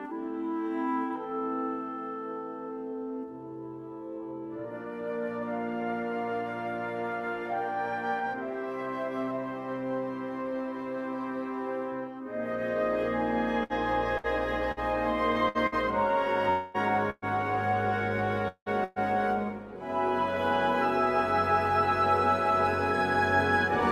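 From 13.63 to 15.75 s the sound turns choppy as short pieces drop out. This is repeated packet loss: five separate gaps, the longest about 63 ms, together removing roughly 300 ms, about 14% of the stretch. Each hole was filled by stretching the preceding sound, and the next gap arrived before the flow had steadied.

At 16.50 s a held, fading continuation of the last sound replaces the audio for about 240 ms, running until 16.77 s without falling to silence. The audio then resumes further on, with that stretch gone. The likely cause is a long network dropout, where the receiver kept extending the last sound it had while nothing new came in.

From 17.10 to 17.25 s comes a burst of packet loss. About 120 ms is missing, bridged by a decaying continuation of the previous sound that ends in roughly 20 ms of silence before the audio returns.

The same held, fading sound returns at 18.48 s and lasts to 18.69 s. 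Here about 180 ms is missing, and the last 60 ms or so thins out into silence before playback resumes, again pointing to a long network dropout rather than a brief hiccup.

A second burst of packet loss follows almost immediately, from 18.84 to 18.99 s. About 120 ms is replaced by a fading stand-in for the previous sound, with no silence before the audio picks up again, minus the lost piece.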